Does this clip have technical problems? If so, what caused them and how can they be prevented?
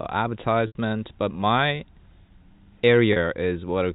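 Yes. At 0.67 to 0.75 s the speech briefly freezes into a buzzy, held tone that fades to a short silence before resuming with a soft cross-fade. At 3.13 to 3.16 s a shorter, slightly held buzz appears. This is packet loss with pitch repetition: audio was lost in transit (80 ms, then 30 ms, which points to several 10 ms packets each time), and the receiver filled the gaps by repeating the last pitch period, fading it out over about 50 ms. The G.711 telephone coding limits the sound to below 4 kHz. Preventing this means giving the voice stream a more reliable network path, with QoS priority and a suitably sized jitter buffer, or adding forward error correction so that lost packets can be rebuilt.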